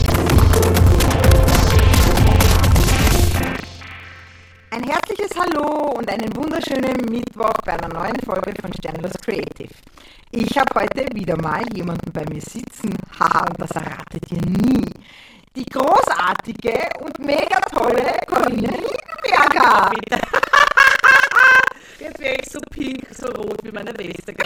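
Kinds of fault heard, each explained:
Buffer tearing: a steady 25 Hz rattle, present only while sound plays, as roughly a third of each buffer repeats older audio, unlike silent underrun gaps.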